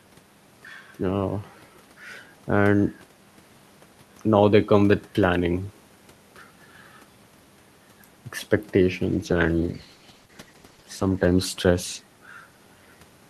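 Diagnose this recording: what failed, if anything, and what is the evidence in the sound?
Call bitrate drop in the codec: 9.06 to 12.91 s turns rough and muffled, which fits an encoder squeezed from 48 to 13 kbps.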